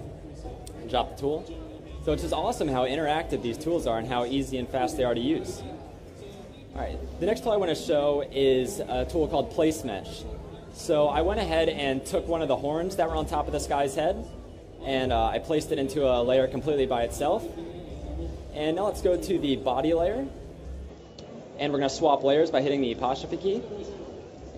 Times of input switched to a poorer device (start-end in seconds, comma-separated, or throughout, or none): 20.89-24.57